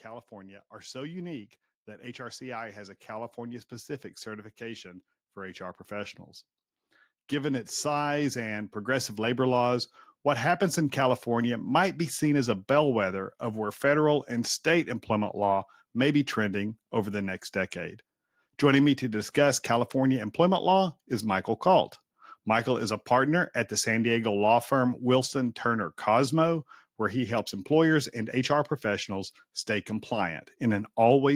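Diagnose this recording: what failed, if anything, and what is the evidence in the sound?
Automatic gain rising in the call processing stage: from 0.05 to 11.04 s, just before "might be seen as", the speech and background noise swell together by about 17 dB. The waveform envelope widens steadily, and the spectrogram's noise floor brightens with the voice.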